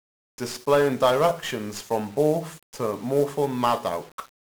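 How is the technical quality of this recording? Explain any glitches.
Poor: the speech is heavily degraded by a single codec fault. 1-bit DFPWM compression runs throughout: each sample steers an adaptive level up or down, so strong broadband quantisation noise makes everything fuzzy and crackly, burying treble in hiss.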